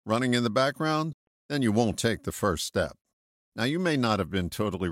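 At 1.13 s the speech cuts to silence for about 0.14 s, ending at 1.28 s just before "then you won't take". This is likely a Bluetooth dropout: packets arrived too late and were discarded. Speech resumes further on, as though it played through the gap.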